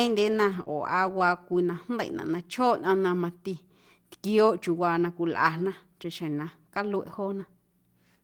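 At 0.59 to 0.61 s, one stretch of speech turns briefly rough and noisy. This is a lost packet rebuilt from error correction. The next packet carried a low-bitrate copy, and the decoder played it. The 20 ms span suggests one lost packet.

From 0.63 to 0.68 s comes a short concealed packet loss. About 20 ms of audio never arrived. The receiver extended the preceding sound for about 28 ms and blended it back. It is heard as a brief smear.

At 0.68 to 0.70 s, another lost packet rebuilt from error correction follows at once. Another 20 ms low-bitrate copy sounds coarse and noisy, again fitting a single packet.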